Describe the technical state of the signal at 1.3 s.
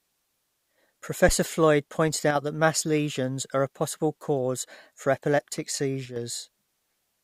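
At 1.3 s there is a phantom power thump, running from about 1.29 to 1.35 s. A supply switched on or off on the live input puts a sudden DC step through the coupling capacitors, which the signal path passes as a single deep low-frequency thud that dies away within about 14 ms. Unlike a plosive pop or a handling bump, it comes from an electrical step rather than breath or mechanical contact.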